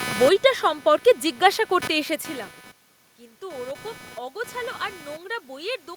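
From start to finish the speech carries computer activity noise: a buzzy, chirping rasp pulsing at roughly 300 per second, sitting only around 15 dB below the speech. Changing processor, graphics or mouse load shifts the ground that the audio circuit shares, and that current leaks in. Unlike steady mains hum, it flickers and scratches with the machine's workload rather than holding one tone. The level change near 2 s is the talker moving, not this interference.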